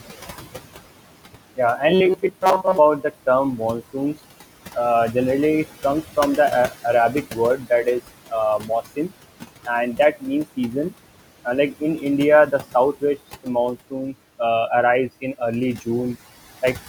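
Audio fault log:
Throughout: noise suppressor artifacts. Room noise sits about 14 dB below the speech, and the suppressor pulls it down by about 17 dB in the gaps, then lets it back up under each phrase, so the background pumps in step with the talking. On a spectrogram, the noise floor shows patchy, isolated specks between phrases and a denser haze beneath the speech.
1.93 to 2.78 s: robotic sound from repeated short buffers. For almost a second, the speech turns into a rigid metallic buzz at 188 Hz that still loosely tracks the syllables. The likely cause is audio arriving too slowly, so a slice of roughly 5.3 ms is played over and over in place of most of the real signal. A spectrogram shows evenly spaced horizontal harmonics at multiples of 188 Hz, and the waveform repeats every 5.3 ms over most of the span.
7.13 to 7.38 s, 7.57 to 7.86 s, 8.59 to 9.11 s: speech cut by the noise suppressor. 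In three places, the suppressor mistakes quiet parts of the speech for background and turns them down along with it. The drops are about 7, 13 and 10 dB, each affecting a short stretch of roughly a tenth of a second or more, so the affected speech sounds swallowed. The waveform envelope shows notches there, and the spectrogram shows faded energy.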